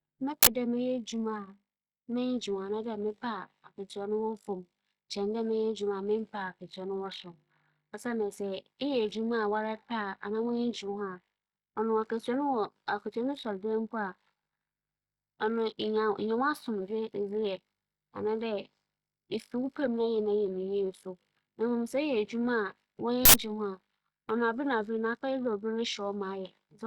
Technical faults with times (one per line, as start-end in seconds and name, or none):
0.43-0.47 uninitialised buffer
23.25-23.34 uninitialised buffer